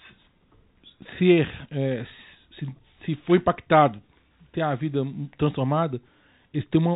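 No technical faults are audible.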